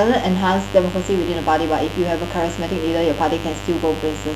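Interference from 50 Hz mains gets into this speech recording and stays for its whole length as mains buzz, a steady raspy tone about 10 dB below the speech, with harmonics reaching several kilohertz.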